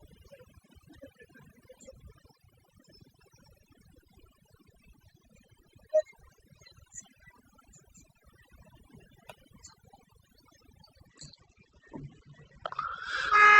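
From the start and across the whole recording there is overdone noise removal. The noise reduction was set so aggressively that any frequency band sitting near its noise estimate is pulled far down or switched off, and the quieter parts of the speech are removed along with the noise. Between phrases the background sinks to near silence dotted with twinkling, chirpy specks. On a spectrogram the gaps look almost black with scattered isolated dots, and the speech harmonics appear ragged and patchy rather than continuous.

At 11.07 s, running to the end, the adaptive stream switches to a lower bitrate. The quality drops suddenly with no gap. The speech loses its treble, with codec artefacts more prominent than before. This fits a switch from a higher-rate Opus stream, around 64 kbit/s, down to roughly 12 kbit/s. On a spectrogram the upper band disappears at that instant, leaving a hard ceiling near 8.3 kHz with nothing above it for the rest of the clip.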